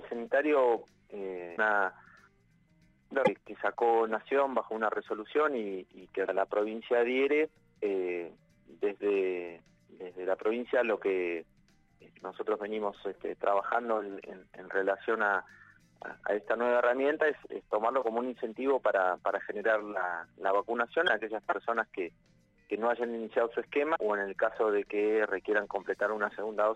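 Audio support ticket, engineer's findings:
Damaged data in compressed stream: short glitches at 1.53, 3.23, 6.23, 21.04, 23.92 s, each about 50 to 60 ms. Decoder misreads corrupt frames, loses sync, resumes at next header.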